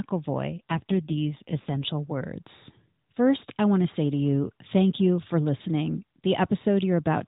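From 0.50 to 1.91 s, an AMR rate drop makes the narrowband mobile codec encode the speech with far fewer bits, which fits a fall from 12.2 to 5.9 kbps. The band stays the same with no gap, but the speech turns rougher and more synthetic until the rate recovers.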